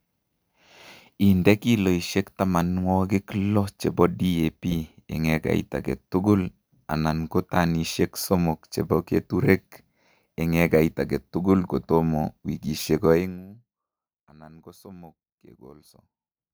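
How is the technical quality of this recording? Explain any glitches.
There is one glitch in this speech recording. From 13.12 to 13.48 s, zipper noise: a level drop of roughly 25 dB is applied in unsmoothed steps, about 150 per second, so the sound buzzes with fine ticking. A waveform shows a staircase envelope, and a spectrogram shows faint vertical click lines.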